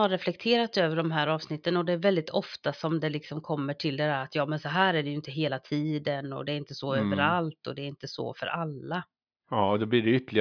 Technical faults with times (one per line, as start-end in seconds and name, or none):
none